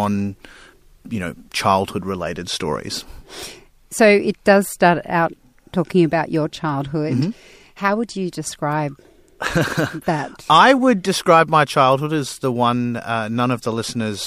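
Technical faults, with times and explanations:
No technical faults are audible.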